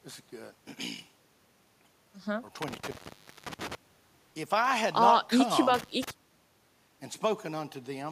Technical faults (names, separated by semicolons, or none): intermittent contact